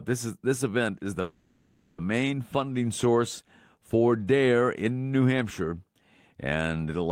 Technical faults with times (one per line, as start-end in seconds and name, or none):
1.21-2.00 call audio freeze